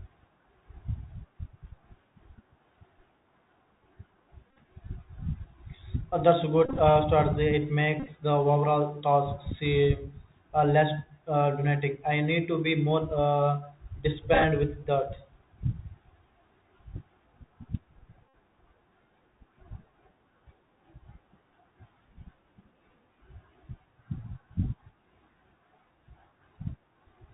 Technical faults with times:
0.00-27.33 Bluetooth CVSD headset codec
4.51-4.59 Bluetooth headset packet repeated
6.65-6.79 Bluetooth headset packet repeated
8.00-8.09 Bluetooth headset packet repeated
14.34-14.44 Bluetooth headset packet repeated
18.29-18.34 Bluetooth headset packet repeated

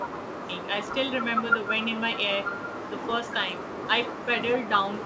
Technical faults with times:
0.00-0.51 speech suppressed in double talk

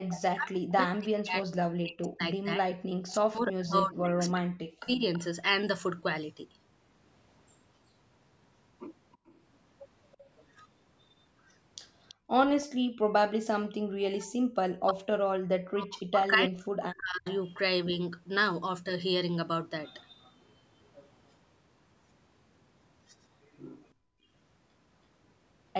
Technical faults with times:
0.00-0.06 background gated by the echo canceller
0.12-5.19 echo leak
0.34-5.02 speech suppressed in double talk
9.13-12.66 echo leak
12.14-12.92 background gated by the echo canceller
14.06-17.26 speech suppressed in double talk
17.28-17.36 echo leak
23.94-24.28 background gated by the echo canceller

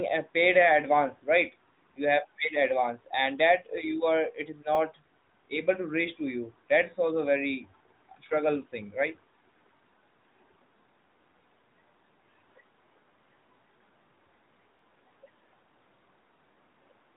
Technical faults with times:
4.75-4.77 overlapping chunks
9.77-9.79 overlapping chunks
14.79-14.81 overlapping chunks

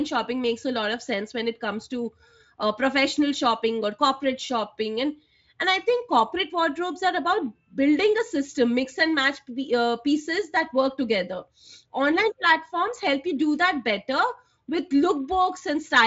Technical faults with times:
none

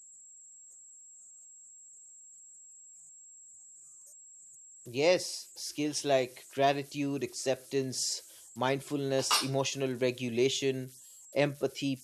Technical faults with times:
0.00-12.03 converter idle tones

